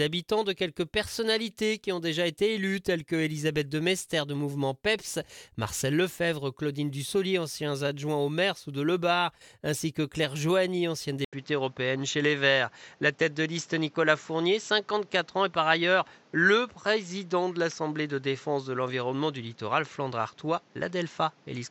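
At 11.25 s there's an 80 ms gap, and from then on the top end stops around 7.6 kHz, with a faint new noise floor and the level about the same. That's likely the input switched to a poorer device, staying duller through the end.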